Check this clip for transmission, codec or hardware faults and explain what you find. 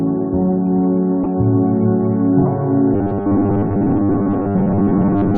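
Two kinds of fault are audible: two brief corrupt frames decoded in the first half, and robotic sound from repeated short buffers running through to the end.

Corrupt frame decoded, at 1.23 to 1.26 s and again at 2.41 to 2.48 s. Each spans a few codec frames whose data was damaged but played anyway, so misread gains and codes throw energy into the wrong frequency bands. The result is a loud chirp or noisy blip, the first one peaking around -5 dBFS. A wrong sound fills the gap and then stops at a frame boundary.

Robotic sound from repeated short buffers, from 2.94 s to 5.37 s. The audio takes on a fixed, metallic buzz at 100 Hz, which fits a 10 ms chunk being replayed over and over. This is likely caused by new data arriving too slowly, with most of the real audio in this stretch skipped rather than played. Comb filtering would colour the sound without locking its pitch. Here the buzz stays rigid while the rough shape of the sound still comes through.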